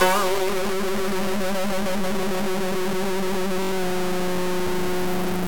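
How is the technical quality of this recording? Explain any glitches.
The technical quality is poor, with heavy distortion throughout the music and a short dropout near the end.

Low bit depth without dither runs through the whole clip. The music sounds coarse and grainy, with distortion roughly as loud as the music itself that shifts as the sound changes. The likely cause is truncation to very few bits, around 3, with no dither to decorrelate the error.

A Bluetooth stutter occurs from 3.63 to 3.72 s. The receiver lost about 85 ms of audio, which points to four missing packets, and filled the gap by replaying its last buffered slice. This is heard as a brief machine-gun buzz, after which the music resumes further along.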